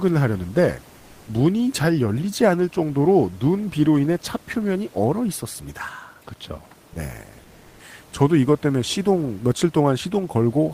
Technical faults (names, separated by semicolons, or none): sound dropped by the voice detector; comfort noise in place of the background